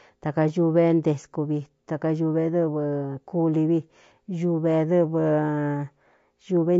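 Throughout, the speech sounds rough and grainy, with noise between harmonics. This is likely low-delay AAC compression, whose short frames resolve pitch poorly, consistent with about 32 kbps.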